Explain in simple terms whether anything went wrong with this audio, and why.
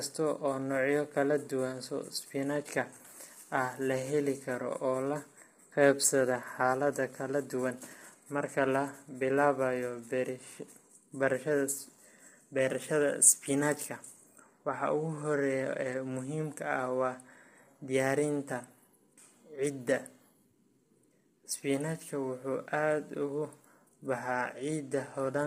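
Something did go wrong, from start to finish. The voice sounds rough and grainy. There is hiss between its tones, and the top end sounds thin and artificial. That points to heavy low-delay AAC compression, likely from a video-call link squeezing the sound into very short chunks.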